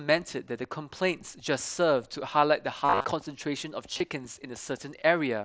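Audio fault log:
2.85 to 3.04 s, concealed Bluetooth headset packet loss: a buzzy, steady tone held at full level with a slight warble as real sound returns. Roughly 165 ms of the 195 ms span went missing on the headset link, in runs up to 45 ms, and the phone filled each gap by repeating the best-matching recent stretch of waveform.
3.93 to 4.00 s, concealed Bluetooth headset packet loss: a shorter buzz. About 53 ms of 75 ms were lost, the longest run 30 ms, and were patched the same way over the light graininess of the mSBC link.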